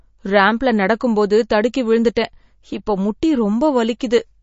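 Throughout the clip the speech is band-limited, with nothing above about 7.6 kHz, and carries plainly audible codec damage: a watery, swirling texture as weak spectral components drop in and out between frames, and metallic edges on sibilants. This points to heavy MP3 compression, likely at a low bitrate around 32 kbps, where the encoder discards the treble at a fixed cutoff and zeroes low-level frequency lines to stay within its bit budget.

At 2.15 s a pre-echo appears: a brief hiss of about 13 ms arrives just ahead of a sharp onset, and the attack itself sounds softened. The transform codec spread quantisation noise across the whole block, and because the transient fell late in that block, noise scaled for the loud portion leaked into the quiet moment before it, smearing the start of the sound.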